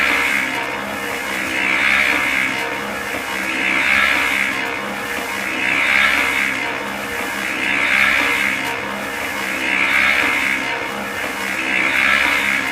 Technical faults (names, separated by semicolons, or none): none